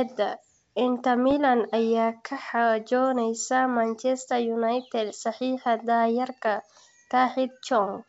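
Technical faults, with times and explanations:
1.31 to 1.33 s and 5.18 to 5.24 s, bit errors on an ADPCM link: short pops and rough, gritty bursts with a brief level change. A small fraction of the G.722 bits arrived flipped, on the order of a tenth of a percent. Each bad bit also knocks the decoder's step size and prediction off track, so the roughness rings on for some milliseconds before the adaptation recovers.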